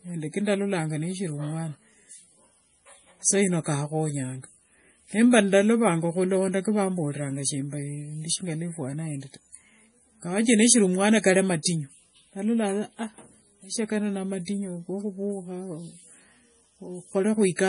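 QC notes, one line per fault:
Throughout: MP3 compression, likely from encoding at a starved bitrate; the heavy damage fits roughly 32 kbps. The encoder discards everything above 10.6 kHz and drops weak frequency lines frame by frame, so the speech sounds dull, watery and swirly, with chirpy sibilants.
11.63–11.65 s: pre-echo. The codec's quantisation noise for a sharp onset is spread across its whole transform block, so about 25 ms of hiss leaks in before the attack, leaving that onset soft and smeared rather than crisp.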